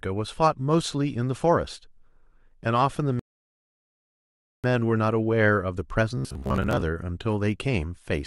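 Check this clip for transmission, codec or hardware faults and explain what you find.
Two faults are present: a playback stall and a short stretch of robotic buzz.

Rebuffering stall, 3.19 to 4.64 s: the player exhausted its downloaded audio and paused, inserting about 1.44 s of silence before resuming exactly where it stopped.

Robotic sound from repeated short buffers, 6.17 to 6.82 s: a rigid metallic 66.7 Hz buzz, likely from the software looping 15 ms segments while roughly half the real audio was skipped.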